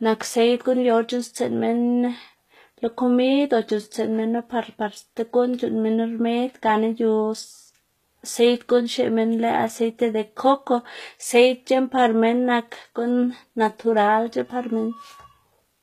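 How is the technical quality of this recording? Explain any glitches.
The recording has plainly audible codec damage for its whole length. From start to end the treble sounds rebuilt rather than natural, and nothing reaches above 14.9 kHz. The likely cause is HE-AAC compression at a bitrate that sounds like about 20 kbps. The codec keeps only the lower spectrum and fills the top by copying lower bands upward under a coarse envelope, so harmonics misalign across the crossover and s sounds come out gritty, metallic or lispy.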